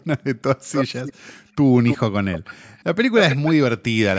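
Echo leak occurs at 0.72–0.85, 1.03–1.33, 1.86–1.98, 2.32–2.54, 2.78–2.84 and 3.15–3.52 s. Each time, a copy of the speech returns about 0.3 s late. The likely cause is a loudspeaker on the far end whose echo canceller let part of its microphone pickup slip through and be sent back. The scraps at 0.72, 1.86 and 3.15 s are nearly as loud as the speech. Those at 1.03 and 2.32 s sit well below it, and the one at 2.78 s is barely audible.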